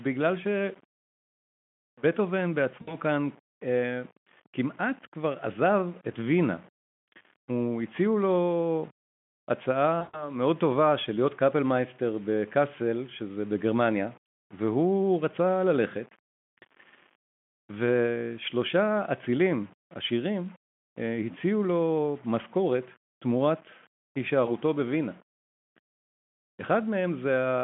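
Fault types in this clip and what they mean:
Low bit depth without dither: A coarse grain runs through the whole clip and follows the speech. It sounds like the signal was rounded with no dither, which fits a likely 7-bit depth. The error sits about 30 dB below the signal. Quiet syllables turn gritty, and the softest tails drop out or sputter.
VoIP packet loss concealed by the speech codec: Packets drop out, and the decoder fills each gap by stretching the last sound. At 2.82 s it fills 60 ms, at 10.0 s 140 ms, and at 24.45 s 20 ms. The voice turns into a stretched tone or noise that fades, then recovers slowly.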